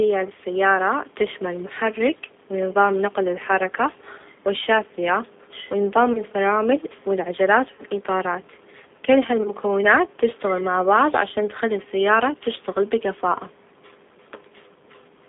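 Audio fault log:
Throughout: G.729 codec. The speech is carried at 8 kbit/s, rebuilt from a vocal tract filter, a pitch predictor and a few pulses per subframe, so it sounds plainly rough and synthetic. The line passes only about 200 Hz to 3.6 kHz, which removes the upper brightness, and the faint room noise some 33 dB below the speech warbles through the coder.
6.13 to 6.21 s, 7.75 to 7.82 s, 9.43 to 9.50 s: VoIP packet loss concealed by the speech codec. About 20 ms, 40 ms and 20 ms of audio went missing, and the decoder filled each gap by repeating its last pitch and filter at falling gain, giving a brief buzzy or noisy, fading smear. Recovery lingers for tens of milliseconds afterwards.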